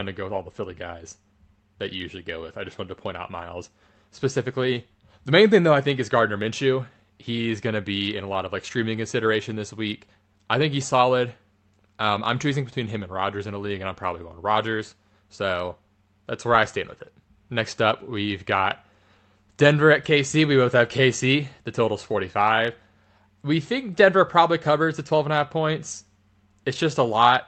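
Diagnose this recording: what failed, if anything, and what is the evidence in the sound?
Nothing in the signal chain has failed: the speech comes through an intact call path whose codec and jitter buffer show no audible breakdown, with the high end rolling off around 8 kHz as expected for an Opus call at this bandwidth setting.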